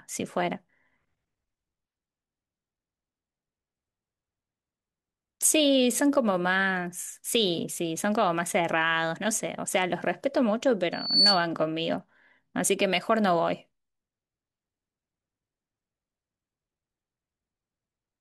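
At 10.92 to 11.47 s a loudspeaker feedback squeal near 4.5 kHz swells over roughly a third of a second to about 10 dB above the speech, showing as one bright horizontal spectrogram line.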